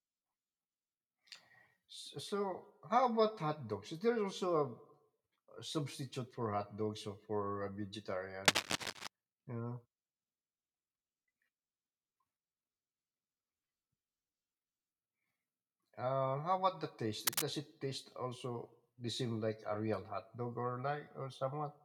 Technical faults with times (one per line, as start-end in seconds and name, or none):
8.45-9.07 cable scratch noise
17.27-17.43 cable scratch noise